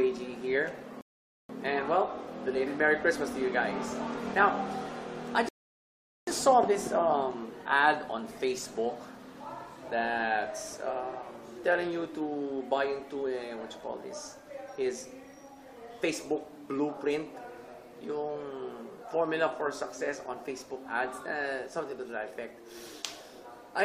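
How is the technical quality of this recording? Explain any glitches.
Two rebuffering stalls interrupt it. At 1.01 to 1.49 s and 5.49 to 6.27 s, the player starved for data and paused, giving dead silence of about 0.48 s and 0.79 s. The sound then picks up exactly where it stopped, so nothing's missing, just delayed.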